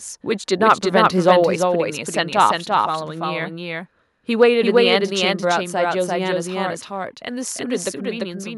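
From the start, a second copy of the speech runs about a third of a second behind the first at roughly equal loudness, dry and full-band, giving a stuttering echo. This doubled audio track likely comes from the same signal being captured twice through paths with different delays.

Between 0.69 and 0.72 s, a brief harsh crackle sits on a loud peak. This microphone overload likely comes from input gain set about 2 dB too high, so the converter flattened the tops of a small share of the waveform.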